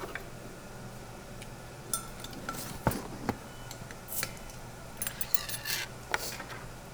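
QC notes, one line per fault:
No technical faults are audible anywhere in the audio, and the signal holds steady in continuity over its whole duration.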